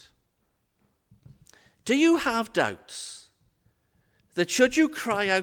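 Nothing technical stands out in this bit of speech, so there's no problem here to pin down.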